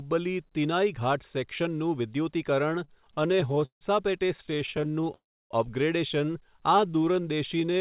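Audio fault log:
2.7–3.83 s and 4.37–5.1 s: repeated stalls (stutter). The first run has seventeen hiccups, the longest about 156 ms, filling about 30% of that stretch. The second has sixteen tiny ones of at most 14 ms each, about 21% filled. Packets kept arriving late, the jitter buffer kept emptying, and the receiver stretched the last sound each time. Nothing's lost, it just drags and judders.
5.14–5.52 s: call audio freeze. The sound holds for a moment, then drops to near-silence for about 310 ms before resuming where it left off, adding roughly 360 ms of delay. Likely cause: packets stuck in transit, so the buffer ran dry and the receiver filled the wait with a fading continuation.
6.57–7.8 s: jitter buffer slow-down. The last stretch plays at about 88% speed with the pitch unchanged, so it sounds drawn out, with about 150 ms added in total. The receiver was rebuilding its reserve by repeating single pitch periods and bits of pauses over and over.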